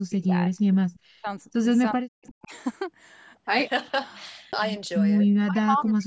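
The speech drops sharply, by around 40 dB at its deepest, from 0.07 to 0.39 s, from 1.00 to 1.27 s, from 1.93 to 2.53 s, and from 5.43 s to the end, losing roughly a third of a second to most of a second each time. This is likely speech suppressed in double talk: with both ends talking at once, the echo canceller could not tell the local talker from loudspeaker echo and attenuated everything.

Between and during these dips, a faint delayed copy of the speech surfaces briefly at 0.94 to 0.99 s, very quietly, and again at 2.27 to 2.31 s, somewhat louder but still well under the main speech. Each copy trails the original by 353 ms. The cause is likely an echo leak: a loudspeaker on one side fed the sound back into its microphone, and the canceller there let short scraps through. The band tops out at 8 kHz, as expected from the call's microphone processing.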